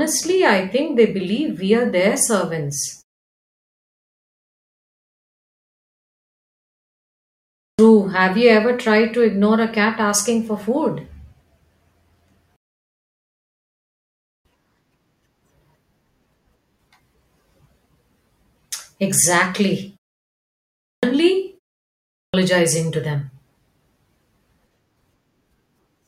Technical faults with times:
7.36-7.79 clipped start after a pause
20.59-21.03 clipped start after a pause
21.87-22.34 clipped start after a pause

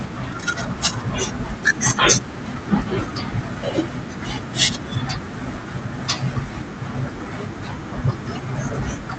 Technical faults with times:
1.43-1.45 skip ahead
1.53-2.63 jitter buffer speed-up
3.41-3.83 jitter buffer speed-up

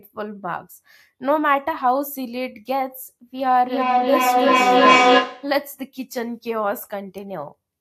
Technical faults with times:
3.44-5.64 feedback echo between two devices

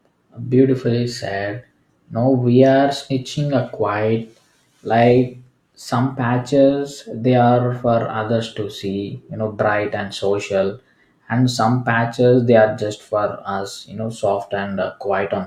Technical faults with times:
none

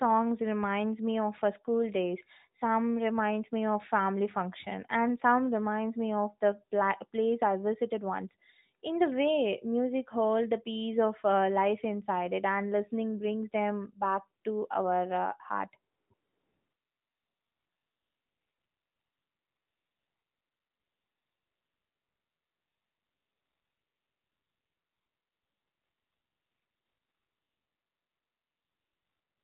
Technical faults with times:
14.42 AMR comfort noise
15.92-29.43 AMR comfort noise

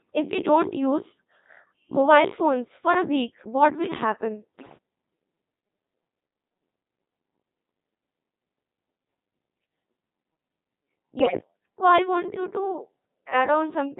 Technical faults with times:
0.00-14.00 Codec 2 vocoder
4.59-4.77 bit errors on digital voice radio
11.19-11.41 bit errors on digital voice radio

